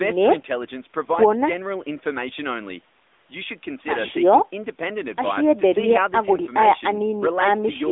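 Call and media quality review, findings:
AMR narrowband mobile codec, whole clip (speech). Band-limited to a telephone line of about 250 Hz to 3.6 kHz, with nothing above 3.8 kHz. Plainly audible codec damage: the voice comes out buzzy and synthetic. The speech is rebuilt from a vocal tract model plus pitch predictor and a few pulses per 5 ms. The damage level fits AMR-NB at around 10.2 kbps. Low-bass cut from the call mic high-pass is normal, not a fault.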